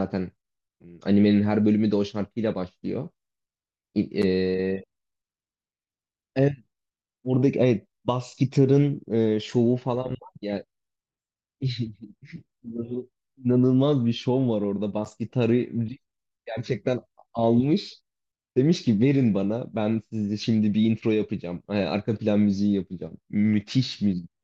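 No dropouts, clicks, distortion or timing errors are heard anywhere in the recording.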